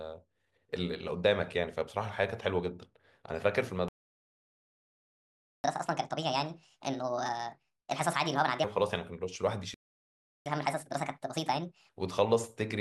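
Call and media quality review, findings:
Playback stall: speech cuts to full silence at 3.88–5.64 s (1.76 s) and 9.74–10.46 s (0.72 s). Likely player buffer underrun or blocked audio thread. Long gap, no smeared concealment like packet loss.

Catch-up at higher speed: 5.64–8.64 s and 10.46–11.89 s at 1.5x, pitch up roughly seven semitones. Player resampling its backlog. Speed and pitch rise together directly after each stall, then return to normal.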